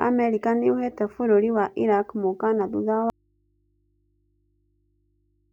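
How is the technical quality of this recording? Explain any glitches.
The recording has one serious glitch: the speech cuts out partway through and never returns.

From 3.1 s, just after "mũkaana thutha", an audio dropout to a faint residue leaves only a low mains hum, about 45 dB below the speech, to the end. The abrupt cut, unlike a pause or fade, likely means the signal was lost while the input stayed live and picked up hum.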